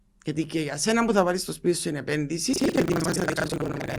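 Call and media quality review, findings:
Buffer tearing, 2.52 s to end of clip. Robotic 25 Hz buzz over speech, fits a 40 ms playback period. Write and read pointers crossing each period: most of every period replays audio around a tenth of a second old, hard joins both sides. Distinct from underrun dropouts: no silent gaps, steady buzz present only with signal.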